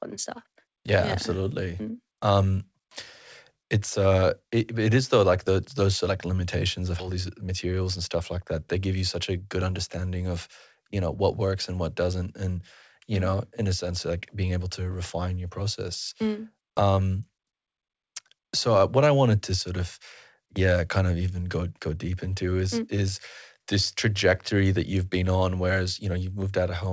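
At 7.0 s, right after "those like limitations of", a skip ahead occurs. A stretch of audio, roughly 0.7 s, was dropped while later material was already queued, which pulled the latency back down by about the same amount. Nothing was filled into the gap, so the sound jumps straight from one side to the other with no pause, and that part of the speech is lost.

From 7.09 to 9.98 s, ending just before "of you know what", a jitter buffer speed-up follows. The buffer was still holding more than its target, so the receiver trimmed small pitch-period-sized slices over and over, about a fifth of a second in total, to catch up. The speech runs at roughly 108% of normal rate without any change in pitch, and it sounds rushed over those three seconds. Throughout, the call path's codec band-limits the audio to nothing above 8 kHz, consistent with G.722.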